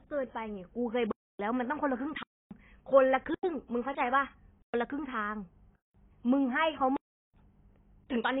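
Transcoding between lossy codecs runs through the whole speech clip. Two layers of coding artefacts are heard together, because the second codec re-encodes the first one's damage and adds its own. That likely points to a low-rate AAC pass, roughly 21 kbit/s, re-coded as HE-AAC at roughly 48 kbit/s. Nothing is present above 20.3 kHz.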